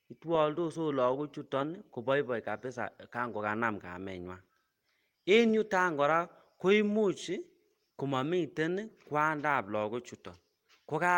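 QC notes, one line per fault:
The speech signal shows no technical faults anywhere in the clip.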